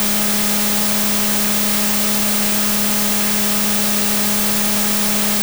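Throughout the music, wrong sample width, which fits 32-bit float read as 16-bit: loud broadband noise over a half-speed, octave-low original; the spectrogram is noise-filled.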